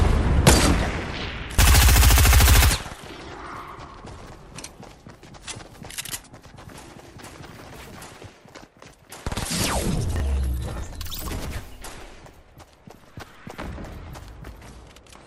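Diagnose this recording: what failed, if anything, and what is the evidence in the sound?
A brief jumbled stutter at 10.16 to 10.2 s is chunks out of order, a buffer-stage fault. One 20 ms block landed a chunk late and played after the block that should follow it. Nothing is lost, but the swap leaves three hard joins.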